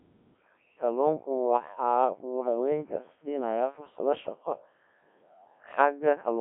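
Codec 2 vocoder damage runs throughout: the speech is resynthesised from pitch and envelope, sounding robotic and buzzy, with nothing above 3.4 kHz, which fits a 1.3 kbit/s mode.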